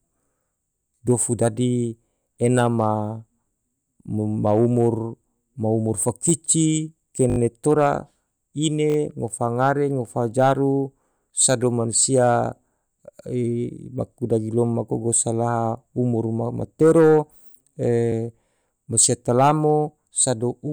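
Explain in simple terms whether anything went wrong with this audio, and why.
Three brief stutters interrupt the speech, all caused by a repeated buffer. New sound didn't reach the playback device in time, so it replayed the last small piece it had. At 7.3 to 7.38 s that piece sounds five times in a row, at 8.9 to 8.96 s four times, and at 18.12 to 18.14 s twice. The repeats are very short, which fits a 20 ms buffer, so they come across as a quick buzzy stutter with hard joins. A dropout would leave a silent gap instead, but here the same snippet is heard again and nothing seems to be missing.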